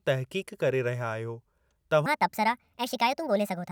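From 2.06 s to the end, a section at the wrong speed. The speech suddenly runs about 1.49 times too fast. Pitch jumps with it, roughly seven semitones up, sounding high and hurried. Playback against a mismatched clock is the likely cause.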